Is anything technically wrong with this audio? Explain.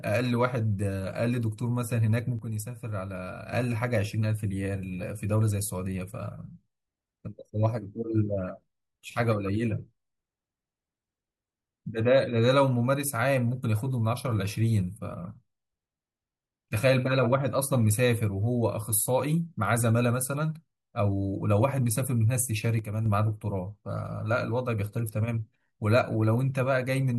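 Yes. The speech suddenly drops about 6 dB from 2.39 to 3.53 s and again from 22.79 to 23.06 s, likely one stereo channel cutting out, which halves the shared signal in the mono mix.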